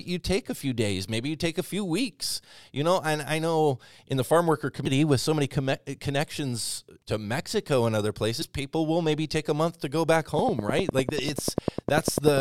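Damaged data in the compressed stream of this speech recording corrupts two brief stretches, and the decoder loses frame sync and skips ahead to the next valid header. Each time, this produces a short glitch in the audio: at 4.86 s, between "in the farm worker" and "with so many", and at 8.41 s, between "and other" and "people will maybe take". Each glitch lasts under 20 ms. From 10.39 s to 12.39 s, after "month to go back", a train of clicks sits over the end of the clip. The likely source is interference from nearby equipment or a faulty connection or power supply, injecting a pulse at a steady 10.1 per second. The result is roughly twenty evenly spaced, similar-sounding ticks that stand out about 15 dB above the speech and stay audible in the pauses.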